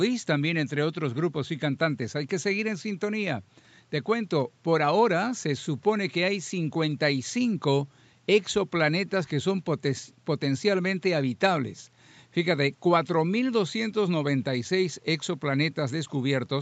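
Speech, with no technical faults to be heard.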